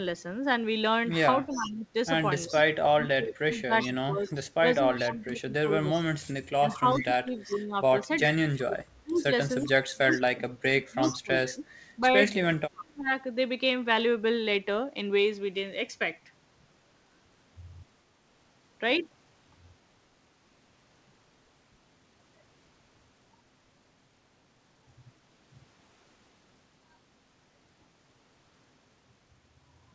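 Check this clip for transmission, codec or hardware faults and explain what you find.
Two echo-canceller faults appear in the first 13 seconds of this speech recording, heard through a call path whose band ends at 8 kHz, which fits G.722 at 64 kbps.

Speech suppressed in double talk, 1.46 to 13.11 s: the talker's level repeatedly drops by up to about 25 dB, for roughly seven seconds in all. This is likely the canceller muting near speech it couldn't separate from echo. The waveform shows pinched gaps, and the spectrogram shows faded upper bands.

Echo leak at 1.5 to 2.61 s, 3.81 to 5.09 s, 6.73 to 7.55 s and 10.11 to 11.17 s: a faint copy of the voice trails 380 ms behind, about 20 dB down at first and then about 15 dB down. It is likely uncancelled loudspeaker pickup. The spectrogram shows ghost harmonics offset in time.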